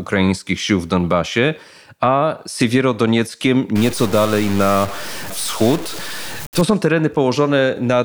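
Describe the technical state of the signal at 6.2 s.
A stuck bit runs from 3.76 to 6.61 s, so at 6.2 s the speech is still inside it. The sound points to a data line or converter bit that is likely frozen at one value, with a weight of about -25 dBFS. Roughly half the samples are shifted by that amount, following the waveform's shape, which gives a harsh, buzzy distortion over the speech. Small values near zero flip between offsets, so quiet gaps fill with noise.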